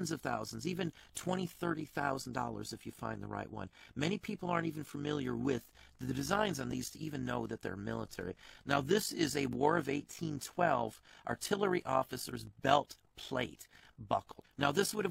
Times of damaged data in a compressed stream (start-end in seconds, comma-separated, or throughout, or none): none